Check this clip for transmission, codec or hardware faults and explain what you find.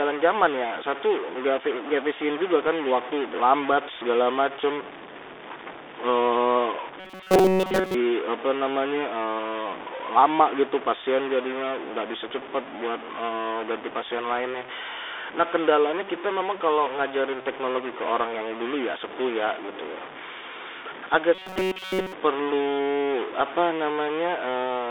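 Three faults are audible in this speech recording.

Throughout, distortion rides on the sound and the pauses fill with noise. A likely stuck bit shifts about half the samples by a fixed amount.

Also throughout, the Bluetooth CVSD headset codec is heard. Nothing passes above 3.6 kHz, and the band sits near 300 to 3600 Hz. Loud high sounds outrun the adaptive step, so s sounds turn scratchy over a grainy hiss, which fits 64 kbps CVSD.

From 7.0 to 7.94 s and again from 21.35 to 22.13 s, there is robotic sound from repeated short buffers. The likely cause is a short buffer replayed instead of new audio, for essentially the whole stretch. The sound becomes a rigid metallic buzz at 188 Hz, which points to a buffer of about 5.3 ms.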